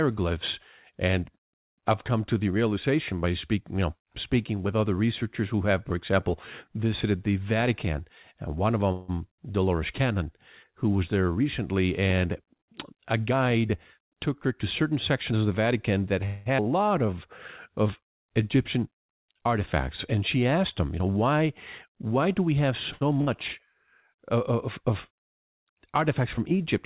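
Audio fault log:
8.92 to 9.10 s, call audio freeze: right after "and one of" the last sound carries on and fades for about 0.16 s, then the audio resumes exactly where it stopped. Nothing is lost; the likely cause is delayed packets draining the jitter buffer, which then filled the wait.
16.26 to 16.48 s, call audio freeze: a second held, fading sound of about 0.2 s, after which the audio continues from the same point with nothing missing. Again the likely cause is packets held up in transit, leaving the receiver to extend the last sound.
13.26 to 15.33 s, jitter buffer speed-up: the audio leading into "of the" sounds slightly hurried, running about 8% fast with the pitch unchanged. The receiver trimmed short pitch-period pieces, roughly 150 ms in total, to shrink an oversized buffer and cut delay.
16.58 s, skip ahead: playback jumps forward almost seamlessly, with roughly a tenth of a second of audio gone and the two sides butted together. 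Later audio was already waiting, so a stretch was dropped to catch up.
16.99 to 18.25 s, jitter buffer slow-down: the sound drags a little, about 4% slow at the same pitch, with slightly drawn-out sounds. Repeated pitch periods, adding 61 ms overall, rebuilt a reserve in the buffer.
22.92 to 23.03 s, short stall from a late packet: just after "why do we have" a sound is held too long with a slight buzz or dip, about 84 ms, then continues from the same place. A packet missed its slot and the receiver stretched the last sound until it arrived.
23.21 to 23.29 s, burst of packet loss: a brief held, fading sound of about 61 ms, and the audio then resumes further on with about 60 ms missing. Consecutive packets were lost or arrived too late, so the receiver faded out the last sound before skipping ahead.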